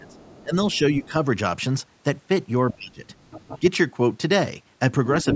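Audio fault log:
0.00–1.14 s and 2.73–3.03 s, speech suppressed in double talk. The speech dips and breaks up while a second voice is present. In the first stretch the drop reaches about 15 dB and comes in pieces that add up to roughly half a second. The second stretch goes deeper, about 25 dB, for around 0.3 s. The likely cause is an echo canceller that cannot separate the talker from loudspeaker echo, so it turns both down together.
0.10–1.06 s, 3.06–3.60 s and 5.22–5.35 s, other side's voice leaking through. A second voice sits under the talker. It is faint at first, about 30 dB below the speech. In the middle stretch it rises to about 20 dB below. At the very end it is nearly as loud as the speech, about 5 dB below. The likely cause is the far side playing on a loudspeaker, with the echo canceller leaving part of it in the microphone signal.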